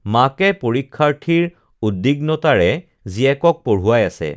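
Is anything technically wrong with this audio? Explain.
No, the speech signal shows no technical faults that a listener can hear.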